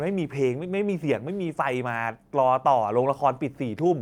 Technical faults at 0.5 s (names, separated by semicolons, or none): none